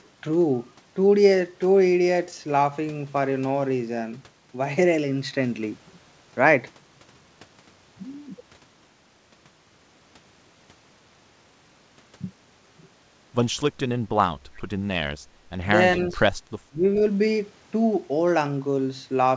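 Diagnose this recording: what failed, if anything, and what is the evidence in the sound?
Call processing, echo leak: faint copies of the speech trail by 402 ms, about 25 to 30 dB down, at 14.56–14.62 s and 16.09–16.16 s, likely residue the canceller missed.

Call processing: the echo canceller clamped the microphone while its loudspeaker played, so the background is gated, dipping about 9 dB from 15.27 to 15.51 s.

Call processing, speech suppressed in double talk: the speech drops roughly 25 dB at 16.68–16.84 s, likely the canceller turning everything down while both sides overlapped.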